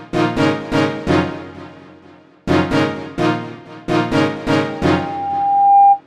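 From 4.67 s a single steady tone near 798 Hz swells over roughly a second into a squeal that ends up about 10 dB above the rest of the sound, lasting until 6.01 s. This is loudspeaker feedback squeal: a microphone is picking up its own loudspeaker, and at that frequency the loop gain exceeds one, so the tone keeps feeding itself.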